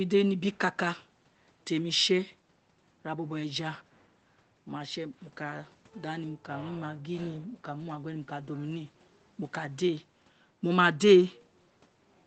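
Nothing stood out on listening to this speech, which comes across with the narrowed, call-like bandwidth of an ordinary WebRTC call path.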